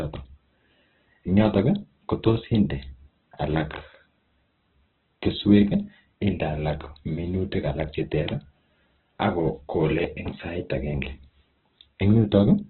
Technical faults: Opus compression

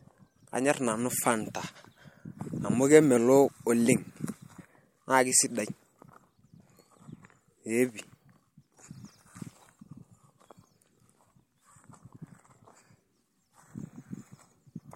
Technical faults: sample clock jitter

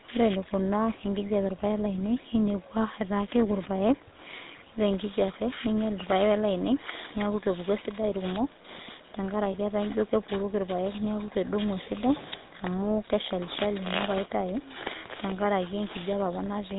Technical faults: GSM full-rate codec; lost GSM frames

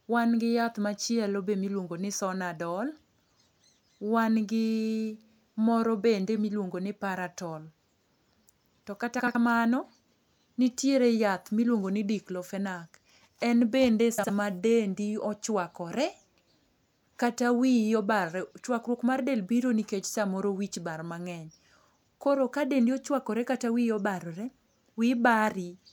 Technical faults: frames out of order

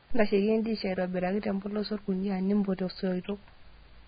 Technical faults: Vorbis compression

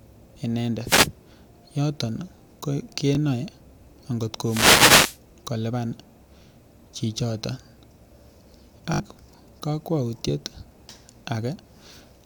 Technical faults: wireless microphone noise hit; Bluetooth stutter

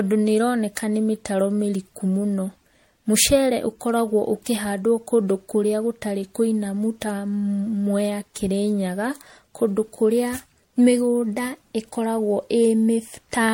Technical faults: generation loss

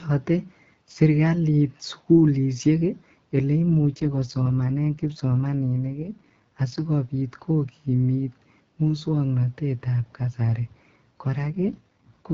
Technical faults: AMR rate drop

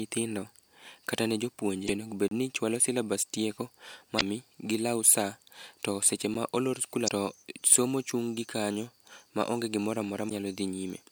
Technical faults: damaged data in a compressed stream; block of digital silence

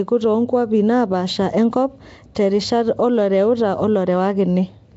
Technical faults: Nellymoser compression; pre-echo

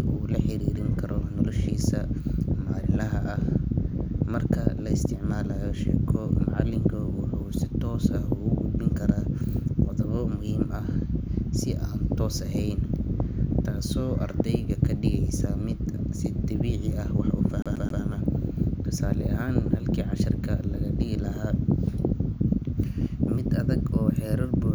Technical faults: CD stuck on one turn

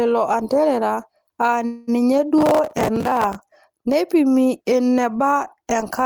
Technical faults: call audio freeze; processor overload crackle

